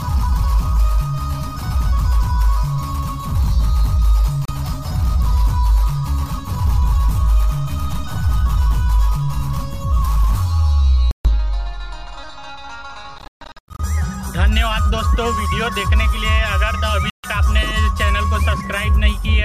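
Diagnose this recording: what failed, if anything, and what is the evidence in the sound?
Playback over the wireless link failed intermittently, likely a Bluetooth dropout: packets arrived too late and were discarded. Abrupt silences fall at 4.45–4.50 s, 11.11–11.33 s, 13.18–13.80 s (scattered gaps, longest 137 ms) and 17.10–17.27 s, and the sound resumes further along, as if it had kept playing.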